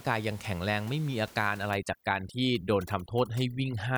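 Overdone noise removal affects this speech recording from 1.71 s to the end: a noise reduction stage set far too aggressively pushes any frequency band sitting near its noise estimate down to almost nothing, taking the quieter parts of the voice along with the room noise that lies about 22 dB below the speech. The background drops and breaks up into twinkling specks.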